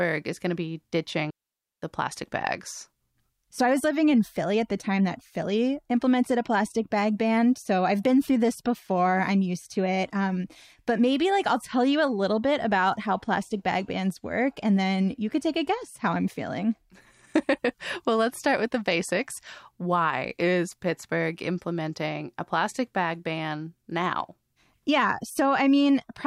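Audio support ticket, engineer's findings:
Digital wireless dropout, 1.30 to 1.83 s, just before "the plastic bags". Receiver mutes after the RF link loses data: clean 0.52 s hole, near silence. No noise burst or static at either edge, unlike an analog wireless dropout.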